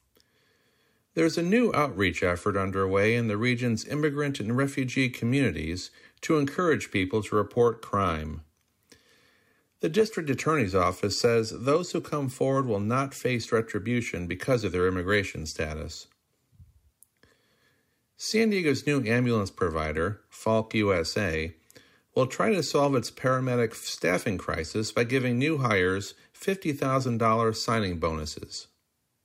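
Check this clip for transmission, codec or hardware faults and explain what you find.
One fault is present: a single instance of dropped samples at 24.87 s, between "solve its paramedic staffing" and "by giving new hires". It is likely caused by a handful of samples going missing from the stream, well under a millisecond's worth. The waveform jumps straight from one value to a later one, and that discontinuity is heard as one sharp click in the speech. It shows as a thin vertical line across the spectrum, and no audible content is lost.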